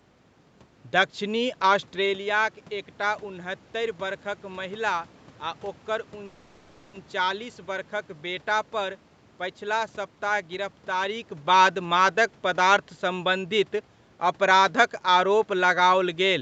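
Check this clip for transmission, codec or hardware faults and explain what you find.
Two delivery hiccups show up, both the kind where the audio gets held rather than lost.

From 6.25 to 6.95 s, right after "बरखक महिला आ ओकर", there's a call audio freeze. The likely cause is packets held up in transit until the jitter buffer ran dry. The receiver carries the last sound on as a fading buzz for about 0.7 s, then picks up exactly where it left off, so there's a gap but nothing missing.

At 9.08 to 9.12 s, just before "पछिला सप्ताह गिरफ्तारीक बाद", there's a short stall from a late packet. One packet missed its slot, so the receiver stretched the preceding sound by about 20 ms until it arrived. You hear a slightly held sound with a faint buzz or dip, and nothing is lost.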